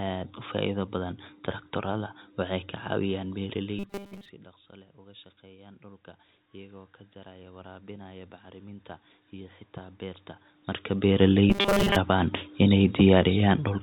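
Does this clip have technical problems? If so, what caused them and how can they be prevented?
Yes. Automatic gain rising from 3.68 to 10.29 s: the voice dropped about 21 dB, so gain crept up about 10 dB, lifting room noise too, unlike a talker moving. Cap the maximum gain.

Robotic sound from repeated short buffers at 3.79–4.29 s and 11.5–11.96 s: a rigid 200 Hz buzz, likely from repeating 5 ms chunks, pitched unlike codec hiss. Deliver audio steadily.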